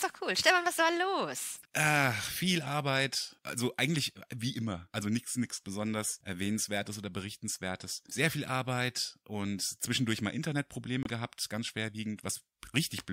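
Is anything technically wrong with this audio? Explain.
Yes. At 11.03 to 11.10 s, a span of roughly 70 ms in the last stretch of the speech, there is a corrupt frame decoded. Flipped bits in a few consecutive compressed frames were played rather than concealed, so the decoder applied wrong gains and misread spectral codes, placing energy at frequencies the speech never had. The result is a short chirp, squeak, blip or burst of noise, peaking somewhere near -25 dBFS, lasting about as long as the damaged frames.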